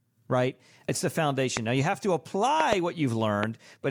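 Loud pops at 1.57–1.59 s, 2.60–2.75 s (a double pop just after "you have to"), and 3.43–3.45 s jump about 15 dB above the speech, which carries on underneath rather than dropping out. That points to voltage spikes, likely from static or a switching glitch.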